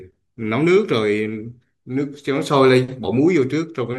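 No technical fault can be heard anywhere in the speech recording.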